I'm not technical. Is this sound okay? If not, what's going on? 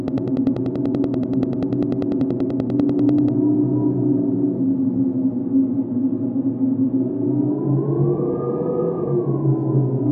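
No. From 0.08 to 3.29 s there's a train of clicks: about 30 near-identical ticks, evenly spaced at roughly ten per second, likely from electrical interference. That steady rhythm sets it apart from random crackle. From 5.41 s to the end, the adaptive stream drops to a lower bitrate. The sound suddenly gets coarser, with no silence at the switch, which distinguishes it from a dropout.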